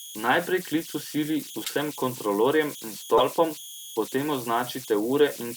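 A whistle around 3 kHz, with grainy noise about 16 dB below the speech, runs through the whole clip: converter idle tones from an undithered delta-sigma converter settling into repeating bit patterns. Short chirps and noise bursts at 1.64–1.70 s (after "klic v sili", before "kontrolorjem in") and a louder one at 3.17–3.21 s (after "kontrolorjem in") come from a corrupt frame decoded: damaged compressed frames played anyway, spraying energy at wrong frequencies.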